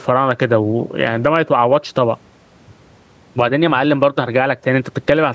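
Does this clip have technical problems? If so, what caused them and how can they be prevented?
Yes. Gain pumping runs through the whole speech recording. The likely cause is an input gain set far too high, so a fast limiter or compressor clamps down on each loud syllable and releases in the pauses, swinging the level by roughly 10 dB. The room noise sits well below the speech, about 44 dB down. On a waveform the peaks look flattened to a near-constant height. On a spectrogram the faint noise floor brightens in the pauses and darkens under the speech, with nothing above 8 kHz from the call's microphone processing. To prevent it, lower the microphone gain so loud speech never drives the limiter, and use slower attack and release settings if compression is still needed.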